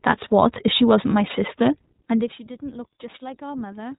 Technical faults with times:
0.00-3.98 iLBC codec
1.05-3.98 loudspeaker feedback squeal

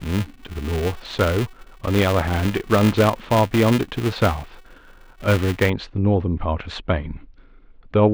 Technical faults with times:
0.00-5.70 filter restarted on every block

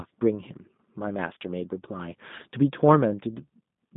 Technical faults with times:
0.00-3.96 G.729 codec

